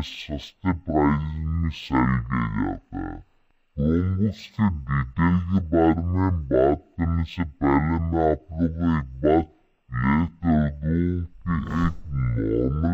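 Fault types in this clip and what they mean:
Stereo read as mono: left and right samples are taken in turn as one channel, so the whole clip plays at half speed and a full octave low. A spectrogram shows every feature stretched twice as long and shifted down, with a fainter mirror image filling the upper half.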